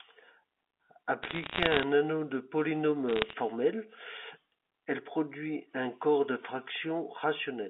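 Bit errors on a digital phone line crackle from 1.23 to 1.83 s, just before "anneau de", and again from 3.09 to 3.33 s. Around half a percent of bits flip in the G.711 stream, and each hit on the sign of a loud sample or a high bit leaves a sharp tick over the band-limited speech.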